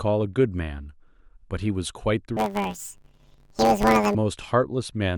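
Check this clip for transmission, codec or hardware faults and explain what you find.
One fault is present: planar audio read as interleaved, from 2.37 s to 4.16 s in the speech. Each 10 ms block stores all left samples before all right ones, but it is read as alternating left-right pairs, so each half plays at double speed in turn. With blocks this short, the sound becomes a robotic buzz at 100 Hz, the block rate. Unlike a true pitch shift, there is no clear octave jump, and the overall pace stays correct.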